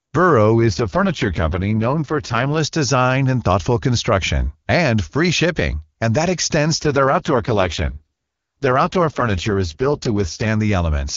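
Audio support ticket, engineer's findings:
Speech turns rough and synthetic with no gap and no loss of band, 0.60–2.58 s (ends just before "design and thoughtful construction") and 6.79–10.48 s (after "shipping and that extends"). AMR rate drop: link adaptation pulls AMR-WB down from its clean 23.85 kbit/s, and the sound fits the 6.6 kbit/s mode.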